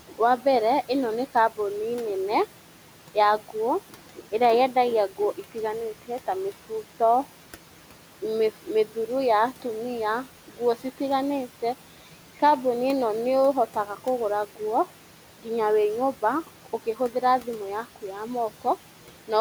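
Throughout, the background sinks between phrases and swells back up under the speech. These are noise suppressor artifacts: the processor pulls down each band it judges to be steady noise by about 12 dB, frame by frame, working against room noise that sits about 19 dB below the speech.

Speech cut by the noise suppressor occurs three times, and in each case soft sounds turn faint and swallowed for roughly 150 ms in total. The first is at 0.09 to 0.46 s, just before "ĩno nĩ kambuni nene". The second is at 3.9 to 4.26 s, just before "ĩrĩa yendagia". The third is at 16.14 to 17.47 s, between "nguo nginya wĩ" and "yaku ya". The suppressor mistook this speech for noise and dropped it by about 11 to 12 dB.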